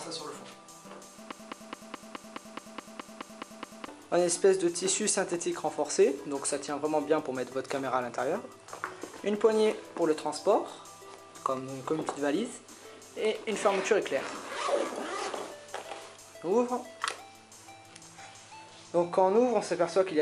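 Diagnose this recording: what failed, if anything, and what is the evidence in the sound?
From 1.32 s to 3.88 s there's a broken-record loop: a 0.21 s fragment plays twelve times back to back, exactly the same each pass. Likely cause is a stall in the player, encoder or stream that kept resending its last fragment, so whatever belonged there is gone.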